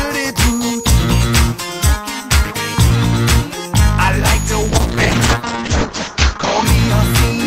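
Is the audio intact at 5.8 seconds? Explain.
No. From 4.7 to 6.71 s a call bitrate drop takes the encoder from 64 to 8 kbps, coding coarsely and cutting the top band from 20 kHz to 8 kHz. The audio turns muffled and watery, with no gaps, unlike packet loss or plain filtering.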